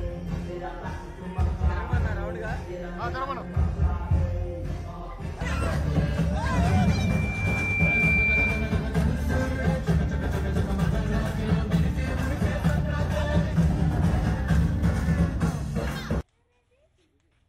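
From 6.66 s to 8.91 s there is loudspeaker feedback squeal: a microphone is picking up the loudspeaker it feeds, and around 2.4 kHz the loop gain tips past one, so that frequency reinforces itself on every pass. A single tone swells over about a second and a half until it sits roughly 5 dB above the surrounding sound, then stops. That gradual build-up is what separates it from a steady interfering whistle, which would appear at full level.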